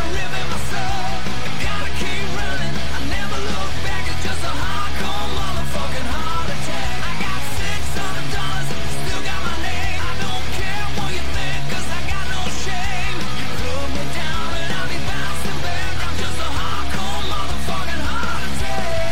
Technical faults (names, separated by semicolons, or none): DC offset